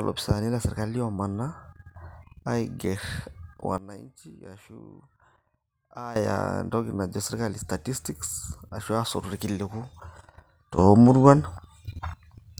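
A gain setting was likely applied in a single step with no ramp, causing two sudden gain jumps: the speech and its background noise drop together by about 15 dB from 3.78 to 6.16 s, then leap up about 12 dB at 10.78 s through the end.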